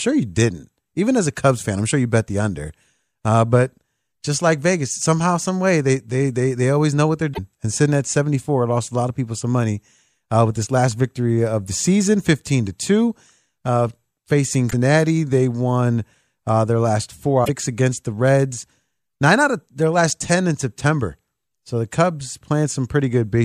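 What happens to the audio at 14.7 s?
Right after "to two uh facing", a brief chirp, squawk, click or short hole cuts in from 14.67 to 14.74 s. That is damaged data in a compressed stream: corrupted bytes make the decoder misread those frames and lose sync until it locks onto the next frame header.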